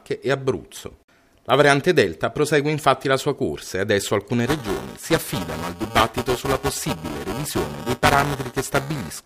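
From 4.46 s to the end, buffer tearing adds a 345 Hz robotic buzz, which fits a 128-sample buffer, as roughly 15 percent of each period replays audio a few milliseconds old.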